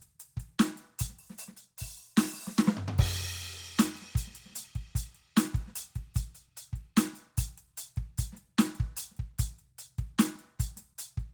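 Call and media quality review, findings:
Nothing to flag on this music clip; it all sounds fine from beginning to end.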